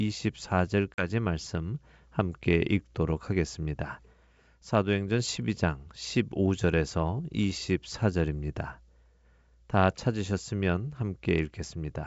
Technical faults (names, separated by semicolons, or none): packet loss on an ADPCM call